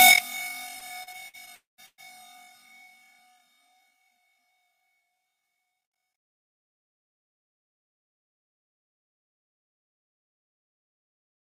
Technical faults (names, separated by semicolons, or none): repeated stalls (stutter); call audio freeze